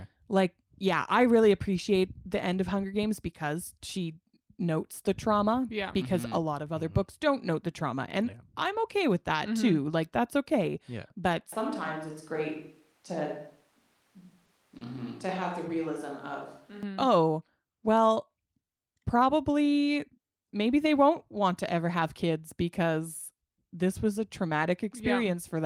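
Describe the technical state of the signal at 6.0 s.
At 6.0 s the speech signal is intact, with no audible dropout, distortion, glitch or other fault at that point.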